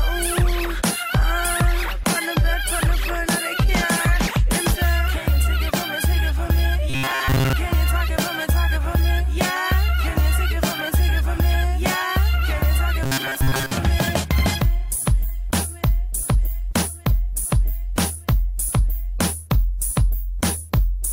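Robotic sound from repeated short buffers appears at 6.90 to 7.53 s and again at 13.03 to 13.71 s: a rigid metallic buzz near 134 Hz. Audio likely arrived too seldom, so a segment of about 7.5 ms was looped, replacing most of the real audio.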